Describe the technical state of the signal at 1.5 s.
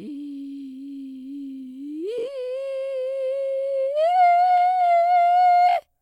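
Nothing is wrong with the music at 1.5 s; the signal runs intact through that point.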